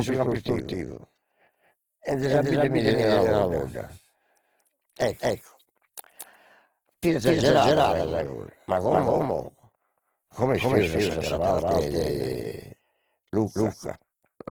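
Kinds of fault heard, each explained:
Doubled audio track: The speech is most likely being captured twice, with a second, slower path or an out-of-step edit laying an extra copy beneath the original. That copy trails by roughly a fifth of a second and plays at much the same level, so each syllable is answered by a flat, full-band repeat with no room decay or colour. The result is a stuttering, doubled sound that runs through the whole clip.
Opus compression: The encoder, likely Opus in its music (CELT) mode, is short of bits, and the grain fits a rate of around 16 kbps. It keeps each band's energy but fills what it cannot code by folding lower bands upward or with noise. Rather than swirling, the speech turns rough, grainy and noisy throughout. The bandwidth stays full, reaching about 20 kHz, yet the damage is plainly audible.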